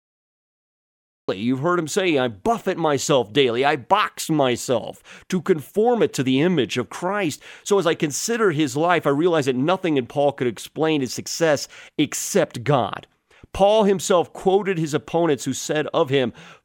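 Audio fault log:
0.00–1.29 s, cut-off start. The clip opens on digital silence, then speech appears abruptly at 1.29 s, already partway through a sound. There is no natural attack or fade-in. Capture began late, so the true beginning of that sound was lost.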